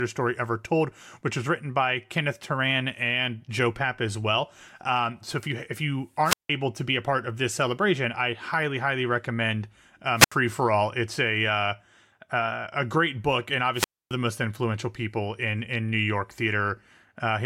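Wireless microphone squelch dropouts occur at 6.24–6.50 s after "if you if you", at 10.16–10.32 s after "I highly highly recommend", and at 13.74–14.14 s before "the most influential people". Each time, the fading radio link lets hiss swell before the receiver mutes for 0.17, 0.08 and 0.27 s. On a spectrogram this shows as a broadband noise smear followed by an empty, flat gap.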